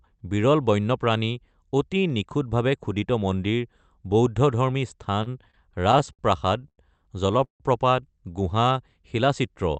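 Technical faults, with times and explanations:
5.23–6.22 s, repeated stalls (stutter): Late packets drained the jitter buffer nine times. The receiver extended the last sound for about 161 ms total, longest gap 60 ms.
6.61–6.65 s and 6.68–6.81 s, short stalls from late packets: A packet arrived late twice. The receiver held the last sound for 16 ms, then 98 ms, so the audio drags briefly.
7.44–7.63 s, call audio freeze: The sound stops and fades into about 120 ms of silence before resuming where it left off. The likely cause is packets held up in transit, emptying the buffer.
8.54–8.95 s, jitter buffer slow-down: Repeated pitch periods add 44 ms, so the audio plays at 91% speed. Sounds are drawn out at unchanged pitch as the buffer rebuilds its reserve.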